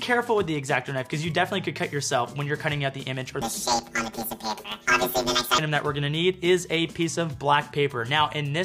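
From about 3.41 s to 5.59 s you get planar audio read as interleaved. The data is stored in 10 ms blocks, all of one channel's samples and then all of the other's, but something is pulling them out as alternating pairs. So each block plays twice at double speed, once per channel, and the overall timing stays intact. With blocks that short, there's no obvious octave jump. Instead you hear a robotic buzz at the 100 Hz block rate.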